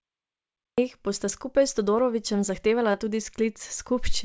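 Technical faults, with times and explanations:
0.00–0.78 s, cut-off start: The clip opens on digital silence, and the speech cuts in abruptly at 0.78 s already partway through a sound, with no natural onset or fade-in. The capture or stream evidently began late, so the beginning of that utterance was never recorded. The step from digital silence straight into mid-waveform signal is what makes the entry sound clipped and sudden rather than like a speaker starting to talk.
2.92–2.95 s, short concealed packet loss: About 20 ms of the call audio failed to reach the decoder in time, and the receiver's concealment synthesised roughly 18 ms to cover it by extending the preceding sound before blending back into the real signal. In this 8 kHz-limited G.722 call audio, the result is a brief smear or wobble in the speech rather than a clean gap. Any very short consonant falling in that window can be lost.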